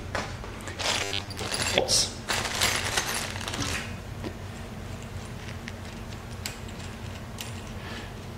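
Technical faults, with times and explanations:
1.04–1.39 s, robotic sound from repeated short buffers: new audio likely arrived too seldom, so a chunk of about 10 ms was replayed over most of this stretch, forcing a rigid, metallic 100 Hz buzz onto the sound.
1.77 s and 3.73 s, damaged data in a compressed stream: corrupted bytes made the decoder misread frames and hunt for the next frame header, so each spot comes out as a brief disturbance, a chirp, click or short gap.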